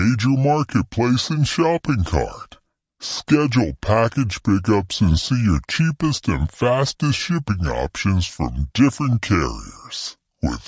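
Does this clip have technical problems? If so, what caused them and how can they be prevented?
Yes. The whole clip has a wrong sample rate fault. The speech plays slow and low, at about two thirds of its proper speed. Pitch drops by about 7 semitones. That combined shift fits audio captured at 24 kHz being played back at 16 kHz with no resampling. Each sample lasts longer than it should. So timing and pitch stretch together by the same ratio. To prevent it, resample to the playback rate, or make sure the player reads the file's true rate.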